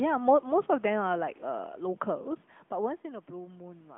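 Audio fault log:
No fault in this audio fault log.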